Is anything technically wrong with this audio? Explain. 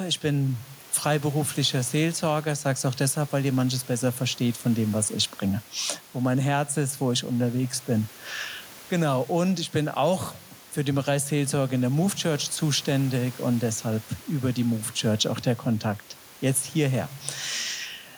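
No, nothing technically wrong is audible in this speech recording.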